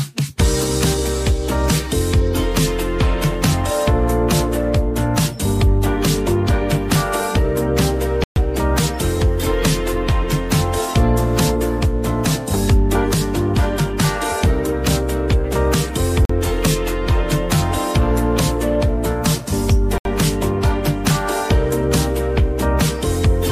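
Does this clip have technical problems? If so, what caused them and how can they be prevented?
Yes. The sound drops to silence three times: at 8.24 to 8.36 s for about 124 ms, at 16.25 to 16.30 s for about 43 ms, and at 19.98 to 20.05 s for about 71 ms. These gaps are likely Bluetooth stalls: radio interference delays packets, the receiver's buffer empties, and playback halts until retransmitted data arrives. Keeping the phone and headphones close with a clear line of sight, away from busy 2.4 GHz traffic, prevents these dropouts.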